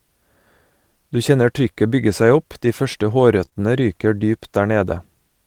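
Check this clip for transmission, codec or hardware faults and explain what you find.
The clip has one transmission fault, short concealed packet loss, occurring three times in a row just after "seg opp de første": at 3.45–3.49 s, 3.49–3.53 s and 3.53–3.58 s. Each time about 20 ms of speech failed to arrive, and the receiver filled the gap by extending the preceding sound before blending back. Together they produce a brief smeared wobble. No silent hole is left, which sets this apart from a plain dropout.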